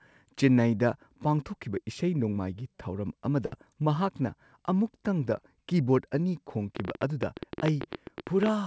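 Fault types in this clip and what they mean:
Burst of packet loss: At 3.46 to 3.54 s, about 60 ms of the speech never arrived in time, and the receiver filled roughly 57 ms by stretching the last received sound and letting it fade before playback picks up again at "ꯃꯍꯥꯛꯅ ꯑꯃꯨꯛꯇꯪꯗ" with a small piece skipped. On a spectrogram the frames just before the gap smear into a held, dimming pattern. In the waveform the envelope decays and then jumps abruptly into the resumed speech.
Train of clicks: From 6.76 s through to the end of the clip, short, similar pulses tick over the speech and its pauses at about 13.4 per second, unevenly spaced, peaking very roughly 15 dB above the speech. This is likely interference or a faulty connection. The waveform shows sharp isolated spikes standing well above the signal. On the spectrogram they appear as thin vertical lines running up to the 8 kHz ceiling left by the G.722 call path.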